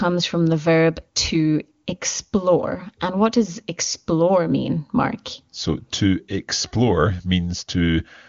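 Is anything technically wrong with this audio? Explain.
No, nothing technically wrong is audible here.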